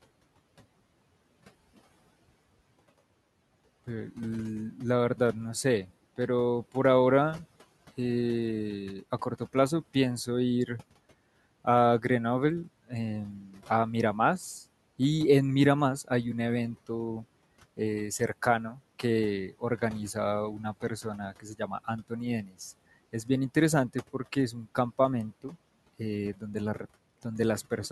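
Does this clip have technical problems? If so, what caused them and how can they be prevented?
Yes. Speech cut by the noise suppressor at 13.41–13.61, 18.71–18.80, 21.32–21.88 and 22.44–22.56 s, ducking quiet speech about 8 to 16 dB with the background. Unlike dropouts, the sound fades rather than vanishing. Gentler suppression settings prevent it.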